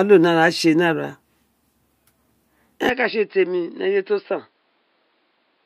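Speech clip in which, at 2.89 s and through to the end, the sound abruptly turns duller and about 5 dB quieter with no gap at the change, most likely because the input switched to a poorer device. On a spectrogram, energy above 5.2 kHz vanishes at that point, and a faint new noise floor appears roughly 45 dB below the signal. The waveform shows the envelope stepping down at the same instant.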